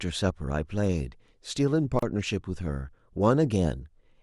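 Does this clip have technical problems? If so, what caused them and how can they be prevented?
Yes. A gap at a join of encoded pieces opens at 1.99 to 2.03 s. Separately encoded segments kept their padding, leaving 33 ms of silence. Trim encoder delay and padding before joining.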